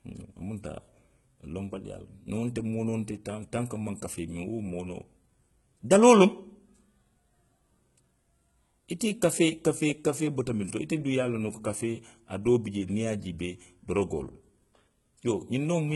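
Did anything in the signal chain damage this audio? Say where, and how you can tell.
Yes. The damage is at the codec stage and runs through the whole speech clip: it was likely encoded as HE-AAC at a very low rate, consistent with about 16 kbps. The treble cuts off sharply at 11.8 kHz, and the sibilants sound gritty and lispy, with a metallic sheen. That upper band was synthesised by copying lower bands upward under a coarse envelope, so its harmonics don't line up with the real ones below the crossover.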